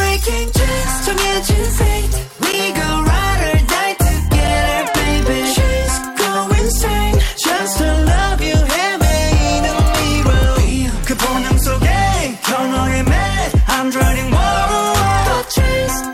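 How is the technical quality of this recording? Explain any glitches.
One glitch stands out. At 2.52 s there is a block of digital silence: the output buffer likely wasn't filled in time, so about 10.7 ms of audio dropped out, which fits a 512-sample buffer. The abrupt cut out and back is heard as a tick or dip.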